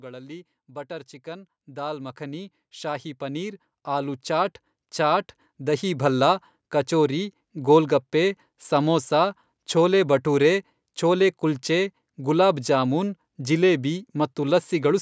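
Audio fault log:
0.05–6.11 s, automatic gain rising: the speech and the background noise grow louder together by about 18 dB over roughly six seconds, because the gain control judged the input too quiet and raised its gain gradually rather than in one step. The gain scales the whole signal, so the noise floor swells along with the voice. The call microphone processing's band limit, with nothing above 8 kHz, stays the same throughout the rise.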